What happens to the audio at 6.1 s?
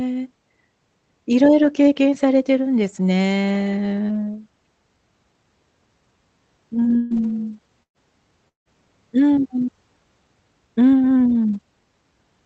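Nothing goes wrong at 6.1 s; the speech carries straight through that moment with no dropout, glitch or other fault.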